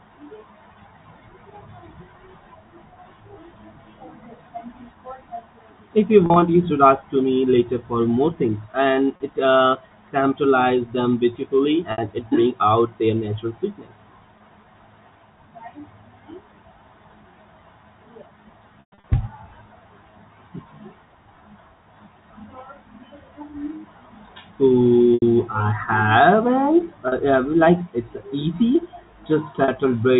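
Speech over a telephone-band channel breaks up eight times, at 6.26, 9.16, 11.92, 14.38, 18.8, 25.14, 27.08 and 29.64 s. The shorter breaks are a brief held, buzzy tone. The worst is at 18.8 s, where 200 ms goes missing across 240 ms and one 120 ms run fades toward silence before speech cross-fades back. This is packet loss with pitch repetition: the receiver loops the last pitch period to fill each 20 to 120 ms gap, which fits 20 ms packets being dropped.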